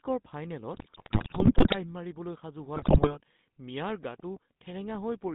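From start to finish the speech carries the GSM full-rate codec's signature: a buzzy, gravelly texture and a band of about 150 Hz to 3.6 kHz, consistent with a 13 kbps full-rate coder. The source-filter model rebuilds the voice from a coarse, regularly pulsed excitation, which produces roughness that is steady rather than warbling. That steadiness separates it from the swirly, metallic artefacts of perceptual codecs.

From 0.74 to 1.76 s, just before "মাৰিবলৈ সাজু", and again from 2.76 to 3.14 s, just after those words, GSM bit errors break up the sound. Corrupted filter, pitch and gain values distort frame after frame, producing squawks, pops and gargling bursts. The density of the damage suggests a heavily corrupted link, with the first stretch worse and longer. The audio turns garbled and jumps erratically in level.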